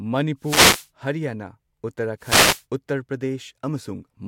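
The analogue FM radio link fades as reflections cancel, so receiver noise surges into brief static swishes over the speech: wireless microphone noise hits at 0.39–0.88 s and 2.19–2.64 s.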